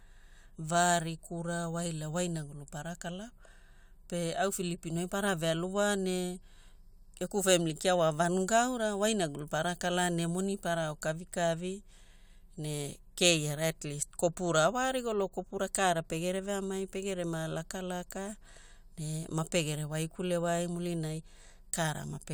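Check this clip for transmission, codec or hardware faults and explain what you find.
No transmission, codec or hardware fault is audible anywhere in the speech recording, with the signal holding steady and continuous throughout.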